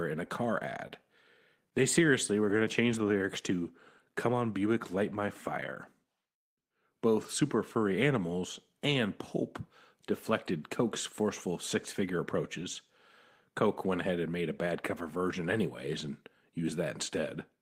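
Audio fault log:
0.87–0.91 s, short concealed packet loss: right after "in a car", about 20 ms of audio went missing, and the decoder extended the preceding sound before blending back, leaving a brief smear.
7.21–7.27 s, lost packet rebuilt from error correction: about 40 ms was replayed from low-bitrate backup copies, likely two lost packets, so there is no gap but the sound turns rougher and noisier.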